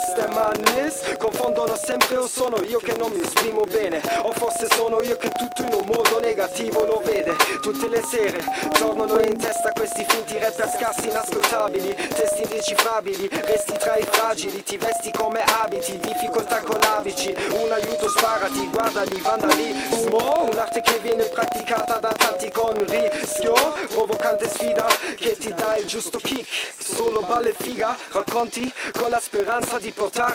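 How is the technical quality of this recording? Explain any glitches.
The recording has one persistent glitch. Throughout, a filter restarted on every block resets from silence every 40 ms. Each reset injects a tiny transient, heard as a 25 Hz buzz that tracks loudness. It shows as evenly spaced vertical lines on a spectrogram.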